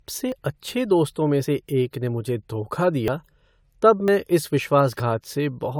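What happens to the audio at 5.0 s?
A dropped buffer (overrun) hits at 5.0 s, right after "तब मैं इस". The sound jumps forward, skipping about 40 ms of audio with no gap of silence. The likely cause is that the software failed to collect its incoming samples before the hardware wrote over them, so that stretch was lost and the audio on either side was joined directly. That butt joint produces the jump in the speech.

The same moment also carries the generation loss heard across the whole clip. The speech sounds swirly, hollow and smeared, and its attacks are softened more than a single lossy encode would explain. The likely cause is repeated decoding and re-encoding, about three passes, with a codec that points to AAC-LC at around 96 kbit/s. Each pass quantised on a new frame grid, so noise and spectral holes built up.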